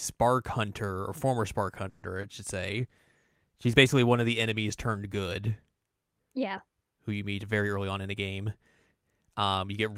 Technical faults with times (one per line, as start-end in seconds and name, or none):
1.89-2.18 call audio freeze
2.21-2.25 short concealed packet loss
2.69-6.61 call bitrate drop
7.43-8.93 jitter buffer speed-up